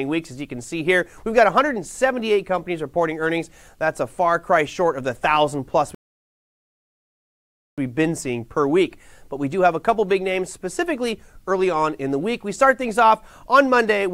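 At 5.95 s the audio halts in a rebuffering stall: playback ran dry of downloaded data and waited about 1.83 s until 7.78 s. Unlike a dropout, which skips material, the sound resumes exactly where it stopped, so nothing is lost and time is only added.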